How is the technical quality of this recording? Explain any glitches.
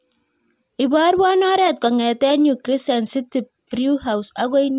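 Nothing here calls for explanation, since the speech comes across with no glitches or technical faults to point to.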